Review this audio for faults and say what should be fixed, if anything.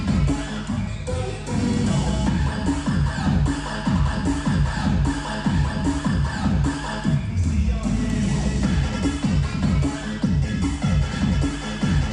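There's mains hum running the whole way through, a steady 50 Hz tone from a ground loop or nearby transformer, sitting only around 10 dB under the sound. Fix the grounding or move the cables away from power supplies.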